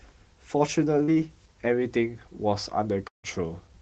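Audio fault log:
1.03–1.10 s, short concealed packet loss: about 40 ms of the call's audio arrived too late for the decoder, so the receiver bridged the gap by extending the preceding speech sound for roughly 41 ms, then crossfaded back into the real signal. The patch is heard as a brief smear or wobble in the speech.
3.08–3.25 s, long network dropout: the signal here is consistent with a likely network interruption of about 160 ms. The decoder continued the last sound for about 158 ms as it faded out, leaving roughly 130 ms of silence in the speech. When the signal resumes, it picks up further along with the missing section skipped entirely. Through the Opus path the surrounding speech carries the codec's ordinary coding texture and a top end that stops at about 8 kHz.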